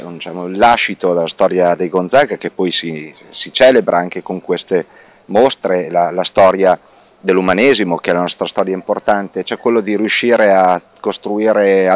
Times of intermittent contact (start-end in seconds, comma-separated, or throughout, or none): none